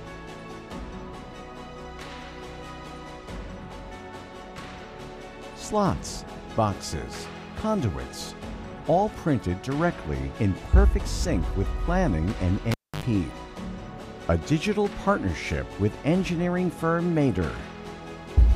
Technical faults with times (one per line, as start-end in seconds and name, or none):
12.71-13.04 cable pulled and plugged in